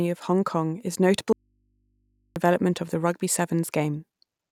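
At 1.33 s the speech drops out for about 1.03 s until 2.36 s, just before "of the rugby", leaving only a faint hum roughly 45 dB below the speech. This is an audio dropout to a faint residue, likely a signal break with the input still live. The waveform collapses abruptly to a flat line, and the spectrogram keeps only thin low-frequency hum stripes.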